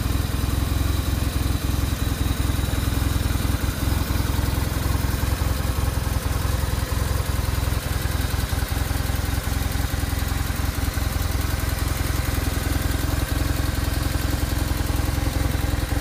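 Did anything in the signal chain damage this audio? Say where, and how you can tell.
No, nothing in the signal chain stood out as a problem when I listened to this audio.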